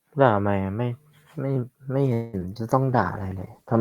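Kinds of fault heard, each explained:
Call audio freeze: From 2.13 to 2.35 s the last sound stretches into a fading fill lasting about 0.2 s. Delayed packets likely emptied the jitter buffer.
Short concealed packet loss: At 2.39 and 2.54 s, about 20 ms went missing each time. The gap was patched with continued sound, leaving a brief smear or wobble.
Call bitrate drop: From 2.89 s to the end, the encoder falls from 48 to 15 kbps. The speech turns coarser and duller as fewer bits code it.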